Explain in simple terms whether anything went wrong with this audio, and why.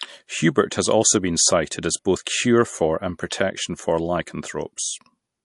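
MP3 compression damage runs through the whole clip, from start to finish: the speech sounds watery and swirly, and s sounds have a metallic edge. The likely cause is heavy MP3 encoding, which throws away high frequencies and faint detail to save space.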